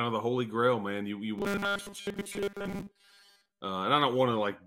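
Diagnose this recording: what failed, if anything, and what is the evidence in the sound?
The buffer stage failed. From 1.38 s to 3.61 s the speech turns into a rigid, metallic buzz that still roughly tracks the words. This is robotic sound from repeated short buffers. The buzz sits at 200 Hz, which fits a 5 ms block being replayed over and over. Fresh audio was likely arriving too seldom for the playback clock. So the software kept looping the last block. Most of the sound in that span is repeats rather than real audio.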